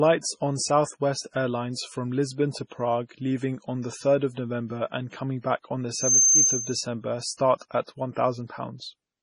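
The speech clip has a watery, swirling texture with heavy codec damage and nothing above 10.5 kHz, likely from MP3 compression at a low bitrate that fits about 24 kbps. From 5.94 to 6.83 s, right after "coming back on the", a loudspeaker feedback squeal at 6.3 kHz swells over roughly a third of a second to about 10 dB above the speech, as the microphone-to-speaker loop exceeds unity gain at that frequency. Pre-echo appears at 7.34 to 7.39 s and 8.14 to 8.16 s: a short hiss of 50 ms and 28 ms precedes each attack, because codec quantisation noise spreads across the transform block ahead of the transient.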